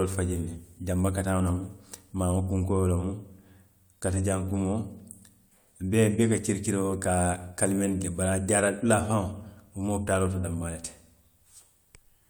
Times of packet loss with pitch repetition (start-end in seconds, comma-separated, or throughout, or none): none